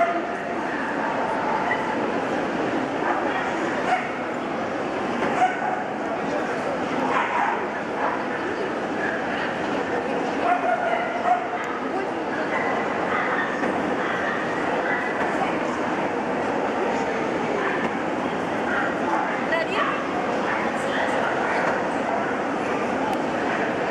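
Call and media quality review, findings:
Nothing to flag on this one; listened through and there's no fault to log in any component.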